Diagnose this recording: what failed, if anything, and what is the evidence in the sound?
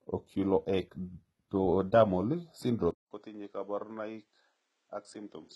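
Codec stage: gritty, metallic treble throughout, cut off above 11.8 kHz, likely HE-AAC compression at about 16 kbps. A spectrogram shows replicated, smeared upper bands above the crossover.

Driver stage: at 2.91 s there is a 200 ms gap in the waveform. After it, sound stops at 8.9 kHz, drops about 10 dB, and gains a noise floor about 40 dB down. This is likely an input switched to a poorer device.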